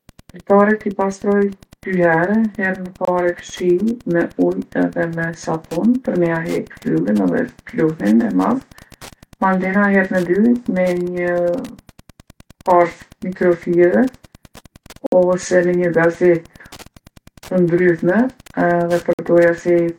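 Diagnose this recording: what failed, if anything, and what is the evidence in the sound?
A faint, steady ticking runs under the speech for the whole recording, repeating about ten times a second and sitting roughly 30 dB below the voice. Its spacing of 102.4 ms is the signature of Wi-Fi interference in the analogue wiring. A nearby Wi-Fi radio's beacon is being picked up and rectified by the audio circuit, so each beacon transmission becomes an audible tick in the signal path.

Three hard-edged silent holes cut into the speech at 3.05 to 3.08 s, 15.06 to 15.12 s and 19.13 to 19.19 s, lasting about 26, 58 and 55 ms. Nothing is missing on either side of them. Sound simply stops and resumes. This is a gap between stream segments at the network or playback stage. The segment time stamps don't line up, so the player pads the shortfall with silence. The spacing fits 4-second segments.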